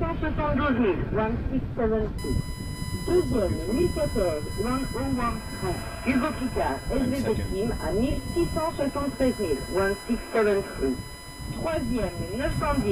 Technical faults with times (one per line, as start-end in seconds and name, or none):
2.18-12.91 USB whine